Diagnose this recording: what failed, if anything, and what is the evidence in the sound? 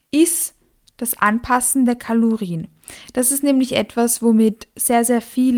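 Nothing failed, and the sound gives no evidence of a fault anywhere in this recording.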